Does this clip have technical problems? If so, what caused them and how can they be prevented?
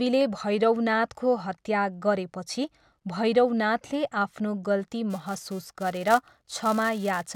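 Yes. From 5.10 s, after "गरेपछि भैरवनाथले आफ्नो गल्ती", a filter restarted on every block adds a 375 Hz buzz. This fits 128-sample blocks. Unlike mains hum, it rises and falls with the speech level. Carrying the filter's state across block boundaries prevents it.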